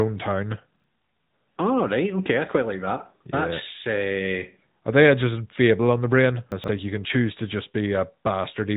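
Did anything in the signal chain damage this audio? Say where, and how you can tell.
Yes, at two stages. The codec stage applied AMR narrowband mobile coding to the whole clip. The speech stops sharply at about 3.8 kHz. Unlike a simple low-pass filter, which only dulls the sound, this band limit comes with a buzzy, synthetic edge. That edge comes from a vocal-tract model excited by sparse pulses in short sub-frames, not from the waveform itself. The damage is plainly audible and points to a mid-range AMR-NB mode of roughly 10 kbps.

At the buffer or network stage there are two spots where chunks play out of order. From 0.76 to 0.84 s, a 40 ms block plays one slot late. From 6.52 to 6.68 s, a 40 ms block arrives about 120 ms late, after the three blocks that should have followed it. Each spot sounds like a brief jumbled scramble. Nothing goes silent and nothing repeats, which separates this from a dropout or a buffer-underrun stutter. 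The audio is all there, just in the wrong order.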